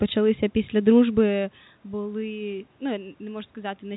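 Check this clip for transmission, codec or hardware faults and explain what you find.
The speech comes through the telephone path intact, band-limited at about 3.9 kHz by its G.711 mu-law coding at 64 kbps, and the room's background noise and the level change around 1 s, where the talker shifts relative to the microphone, belong to the recording rather than to any fault in the signal chain.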